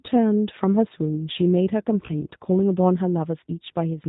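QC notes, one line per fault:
Throughout: G.729 codec. The speech sounds band-limited, with nothing above 4 kHz, and has a plainly audible rough, slightly synthetic edge. The coder does not send the waveform. It rebuilds each 10 ms frame from a vocal-tract filter, a pitch predictor and a few coded pulses, so fine detail between those pulses is lost, and the result is gritty and buzzy. The roughness fits an 8 kbit/s G.729A coder.
2.07 to 2.13 s: VoIP packet loss concealed by the speech codec. For a moment the speech turns into a brief smeared, buzzy stretch with reduced level. It then takes a few tens of milliseconds to regain its normal clarity. About 20 ms of audio went missing, which fits a single lost packet. The decoder filled the gap by repeating its last pitch and filter settings at falling gain. Each following frame builds on that guessed state, so the distortion lingers after real packets resume.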